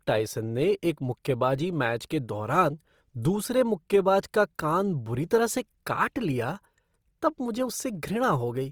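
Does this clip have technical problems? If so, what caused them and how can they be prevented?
Yes. The speech was likely encoded with Opus compression in its music mode at a rate that fits about 24 kbps throughout. Short of bits, the encoder fills bands with folded or noise content, so the sound turns rough, grainy and noisy while still reaching about 20.3 kHz. Encoding at a higher bitrate, or letting Opus use its speech-oriented mode for speech, would prevent this.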